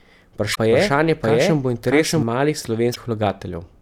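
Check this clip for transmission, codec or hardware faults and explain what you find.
Two kinds of fault are present in this speech: two short bursts of damaged compressed data and a stretch where the audio is doubled.

From 0.51 to 0.58 s and again from 2.91 to 2.97 s, a brief glitch breaks in. This is damaged data in a compressed stream: corrupted bytes make the decoder misread frames, lose sync and jump to the next valid frame header.

From 0.71 to 2.23 s, a second full-band copy of the speech runs roughly 0.7 s behind the original at about the same level. It has no reverberant tail or room colouring and cuts in and out abruptly. This doubled audio track likely comes from the signal being captured twice over paths with different delays, or from an edit that left two offset copies.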